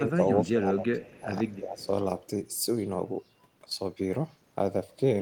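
The speech dips three times, at 0.0 to 0.2 s, 0.42 to 1.32 s and 1.55 to 1.92 s, sinking by around 10, 20 and 15 dB. That's speech suppressed in double talk, likely an echo canceller ducking the near talker while the far end was speaking too.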